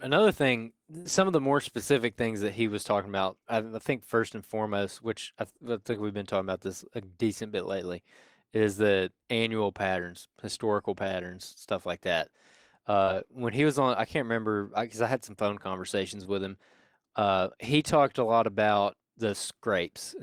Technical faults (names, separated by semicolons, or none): short concealed packet loss; lost packet rebuilt from error correction